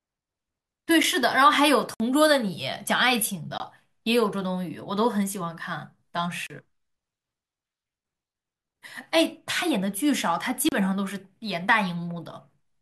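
Sharp ticks and short holes break the speech at 1.03 s, 1.94–2.00 s, 3.58–3.60 s, 6.47–6.50 s and 10.69–10.72 s. Each is a block of digital silence of 8 to 60 ms, where the sound cuts out and returns unfaded.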